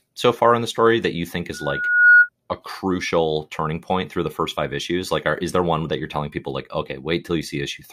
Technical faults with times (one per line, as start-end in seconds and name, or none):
1.53-2.29 loudspeaker feedback squeal